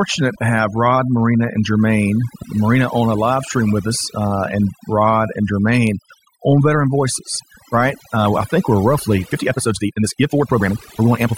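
Throughout, the background drops and breaks up into twinkling, warbling specks. This is overdone noise removal: the reduction was set so strong that bands near the noise estimate were pulled down or cut entirely, taking the quieter parts of the voice with them.

From 9.2 s to the end, right after "I think we're", the pace suddenly races ahead at about 1.91 times the previous rate while the pitch stays put, and the delivery turns rushed. This is likely a time-stretched section, squeezed by dropping short pieces of audio to fit a shorter length while keeping pitch unchanged.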